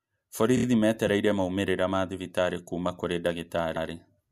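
Speech with repeated frames at two points. From 0.56 to 0.64 s, just before "metereire maumĩrĩra ma thibitarĩ", a 26 ms slice plays three extra times, which fits one compressed frame re-sent. That gives a rapid stutter and adds about 78 ms. From 3.75 to 3.88 s, after "ma thibitarĩ kũũma kũrĩ", a 131 ms stretch plays twice, which fits a run of five frames. The decoder replays what it receives, so the audio grows longer.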